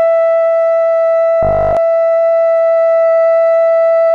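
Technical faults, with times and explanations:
1.43 to 1.77 s, robotic sound from repeated short buffers: the music turns into a fixed, metallic 50 Hz buzz. Likely a 20 ms chunk repeating in place of new audio.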